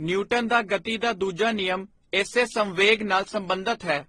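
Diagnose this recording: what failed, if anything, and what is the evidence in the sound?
The codec stage failed: the speech has most likely been through transcoding between lossy codecs, with low-rate HE-AAC early in the chain and then re-encoding by AAC and finally Opus. Throughout the clip nothing is present above 12 kHz, the lowest cut-off in the chain surviving to the end. The artefacts of the different codecs are heard together. Each later encoder spent its bits reproducing the earlier artefacts and added its own, so the damage stacks.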